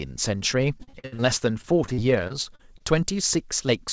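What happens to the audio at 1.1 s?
Packets were repeatedly lost from 0.78 to 1.22 s, six gaps patched by extending prior sound, giving choppy speech with pieces missing: repeated packet loss.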